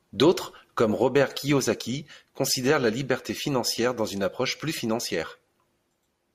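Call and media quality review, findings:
No faults heard in the speech recording. Nothing here needs follow-up on the capture, network or playback side.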